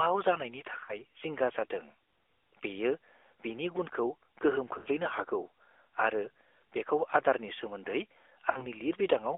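Throughout, the speech carries the AMR narrowband mobile codec. The audio is confined to roughly 300 Hz to 3.5 kHz, with a plainly audible buzzy, synthetic edge from the sparse-pulse vocal-tract model, which fits the 10.2 kbps AMR-NB mode.

Lost AMR speech frames occur at 0.84 s (before "जिंगा जादों"), 4.78 s and 8.50 s. They last about 40, 80 and 60 ms, consistent with two, four and three 20 ms frames. At each gap the decoder stretches the last pitch into a fading warble, then the speech returns briefly rough.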